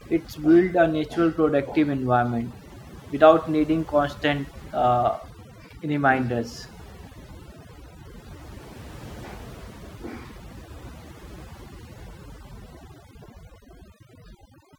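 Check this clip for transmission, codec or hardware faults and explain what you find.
There is one fault, present from start to finish: overdone noise removal. The denoiser's strength is set too high. It suppresses frequency bands near its noise estimate, taking quiet speech detail too. The background drops and breaks up into twinkling specks.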